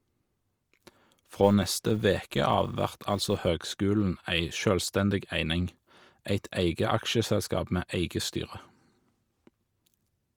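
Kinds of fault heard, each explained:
Bluetooth LC3 compression: a breathy, grainy, noise-filled top end runs through the whole speech clip, likely from LC3 coding in 10 ms frames; unlike the buzz, it never stops.
Filter restarted on every block: each block starts from silence with a small transient, making a 200 Hz buzz from 0.0 to 3.48 s that rises and falls with speech level.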